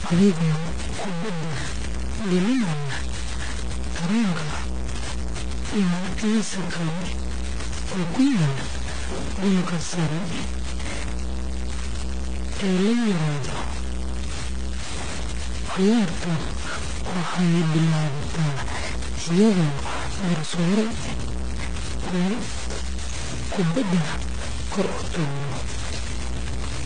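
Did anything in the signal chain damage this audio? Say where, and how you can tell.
Yes. At the sample-format conversion stage, the speech carries coarse, gritty distortion throughout, nearly as loud as the voice and tracking it. Quiet passages sputter or drop out. That points to likely truncation to roughly 4 bits without dither. Dithered requantisation would leave steady hiss instead.

At the codec stage, nothing is present above 9.4 kHz, and two kinds of artefact sit together. This points to transcoding between lossy codecs, likely a low-rate HE-AAC encode re-encoded to MP3. A single encode would show one consistent artefact signature.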